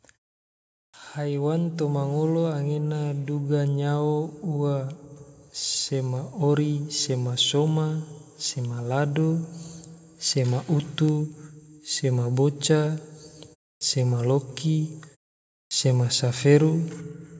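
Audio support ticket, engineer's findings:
Clipped start after a pause: output device sleeping through silence and slow to wake or relock, swallowing onsets. At 0.90–0.94 s (after 0.8 s quiet), 13.77–13.81 s (after 0.3 s) and 15.67–15.71 s (after 0.6 s), roughly 37–41 ms lost each time; speech jumps in abruptly, first sounds missing.

Automatic gain rising: AGC judged input too quiet and ramped gain up by about 6 dB over 1.14–3.56 s, ending just before "nyao ua". Speech and background noise swell together across those two-plus seconds; band-limited call-mic character, nothing above 8 kHz, unchanged throughout.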